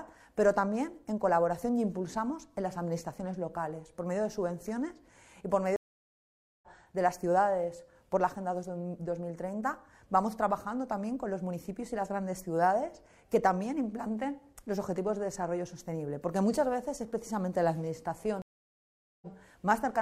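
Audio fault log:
5.76–6.68 s, stream reconnect: the sound stops for 0.86 s, then picks up about a second further into the stream, so material is skipped. Unlike a plain dropout, playback doesn't continue where it stopped.
18.42–19.27 s, stream reconnect: 0.8 s of silence, then playback resumes 46 ms earlier, briefly repeating what came before the break. At both breaks a fresh decoder starts, so the re-entry is softened or muted rather than an abrupt restart.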